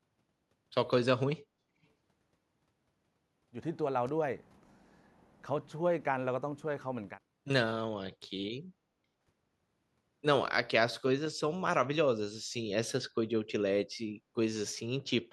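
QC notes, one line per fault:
1.83 to 1.87 s, echo leak: a very faint scrap of speech returns 376 ms late, likely loudspeaker pickup that the far end's echo canceller missed.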